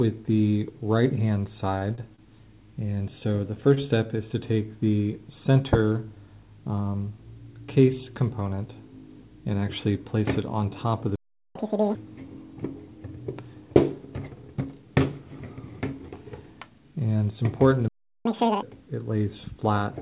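At 1.78, 1.95, 2.16 and 3.74 s the sound briefly smears and holds with a faint buzz, for about 31, 26, 26 and 22 ms. These are short stalls from a late packet: the jitter buffer ran dry and stretched the last sound until the data arrived, losing nothing. The audio, band-limited to 4 kHz as G.711 call audio would be, then goes quiet from 11.16 to 11.55 s for about 0.4 s. This playback stall was likely caused by the player running out of data. From 11.55 to 11.95 s the sound rushes at double speed, pitched up roughly ten semitones. This is catch-up at higher speed, the backlog resampled to regain lost time. The same pair recurs, with a silent playback stall from 17.88 to 18.25 s lasting about 0.37 s, followed by a doubled-speed, raised-pitch catch-up from 18.25 to 18.62 s.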